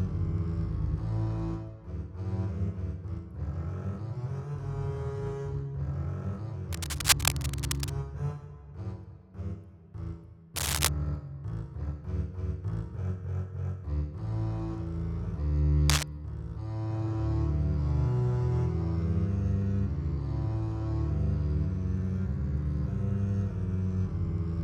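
Three bursts of cable scratch noise ride over the sound, from 6.72 to 8.07 s, 10.56 to 10.89 s and 15.88 to 16.04 s, each a rough, uneven rustle about as loud as the sound itself, likely a worn connector or lead being moved.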